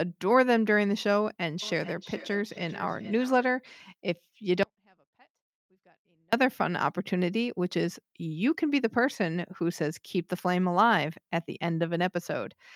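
From 1.62 to 3.54 s the speech returns roughly every 0.4 s, up to about 20 dB down: feedback echo between two devices, one replaying the other's microphone.

At 4.63 s the speech drops to a faint trace around 40 dB below, returning at 6.33 s; likely an audio dropout to a faint residue with the path left live.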